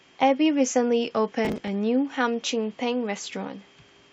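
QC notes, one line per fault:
1.45–1.68 s, processor overload crackle: a burst of gritty tearing sits on the speech for just under a quarter second, then stops cleanly. The processor is falling behind and missing buffer deadlines in quick succession, about fifteen of them, and each miss replays stale audio in place of fresh samples. Every splice has a hard edge, so the repeated fragments, spaced in a way that fits buffers of around 10 ms, fuse into a rough crackling texture.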